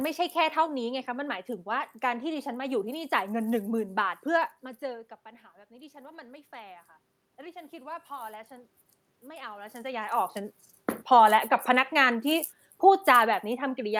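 From 5.68 to 8.56 s there is automatic gain rising. The talker has moved back from the microphone around 4.5 s, and the level arriving there falls by about 18 dB. The gain control responds by slowly adding about 5 dB over nearly three seconds, recovering only part of the drop. Voice and room noise swell together. On a waveform the envelope widens gradually across that span. On a spectrogram the noise floor between syllables brightens at the same rate as the speech bands.

From 10.98 s to the end of the clip there is automatic gain falling. The control found the input too loud, or its background noise too strong for its gain, and pulls its gain down steadily rather than at once. The speech sinks in level, carrying the room noise down with it. A waveform shows the peaks shrinking evenly toward the end. A spectrogram shows every band, including the background between phrases, dimming together.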